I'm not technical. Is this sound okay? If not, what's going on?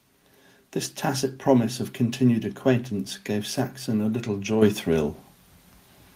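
No. At 4.62 s the microphone volume steps up: the calling software judged the microphone too quiet and turned its input up in one instant step. Unlike a speaker leaning closer, the voice and the background noise both get louder together, all at once.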